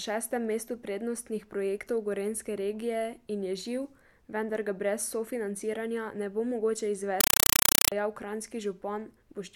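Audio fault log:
7.21–7.92 s, compressed stream played as audio: after "sofinanciranja ne bo mogoče", loud chattering static replaces speech, AC-3 data output as samples, 5.33 ms noise bursts at 31.25 Hz.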